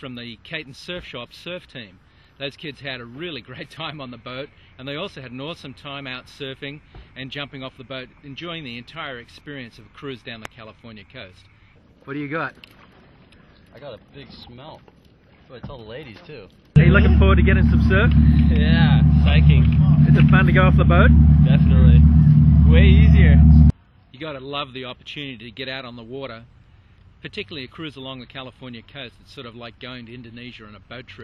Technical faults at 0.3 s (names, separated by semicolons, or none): none